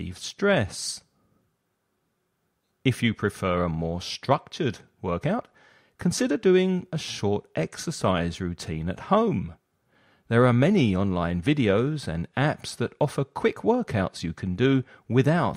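No technical faults are audible.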